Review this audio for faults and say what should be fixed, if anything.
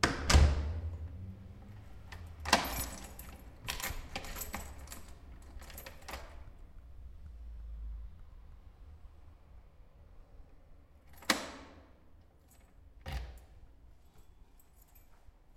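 Nothing needs fixing; no faults can be heard anywhere.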